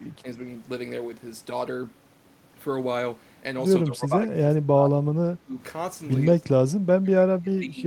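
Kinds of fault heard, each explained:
Speech suppressed in double talk: the talker's level dips briefly and slightly near the start, then repeatedly sinks by around 20 to 25 dB from about 3.9 s to the end, likely an echo canceller unable to separate the talker from simultaneous far-end echo and ducking both.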